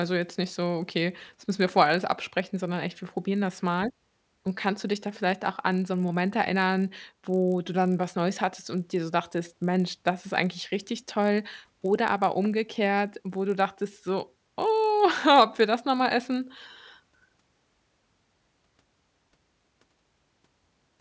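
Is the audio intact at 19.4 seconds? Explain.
No. At 19.4 seconds the speech carries a steady buzz at 50 Hz, present through the whole clip and only while sound is present. This is a resampler restarted on every block. Each 20 ms block was converted alone, likely from 24 kHz to 16 kHz, so every block edge carries a small error.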